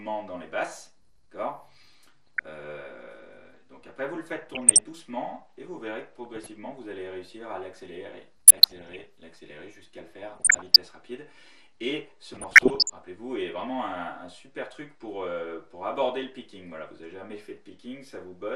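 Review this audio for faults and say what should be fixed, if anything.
Plainly audible MP2 compression runs through the whole clip. The sound is dull, with a gurgling, granular distortion. The likely cause is MPEG Layer II coding at a rate that fits about 80 kbps. Too few bits switch off upper sub-bands and coarsely quantise the rest. To prevent it, encode at a higher bitrate or use a more efficient codec.

DAB burbling appears in six bursts: 2.01 to 2.46 s, 4.47 to 4.81 s, 6.25 to 6.48 s, 8.47 to 9.05 s, 10.36 to 10.76 s, and 12.34 to 12.90 s. Bit errors slip past error correction into the MP2 data. Corrupted sub-band values then produce short noise blips in single sub-bands. To prevent it, improve reception with a better antenna or position, or stronger error protection.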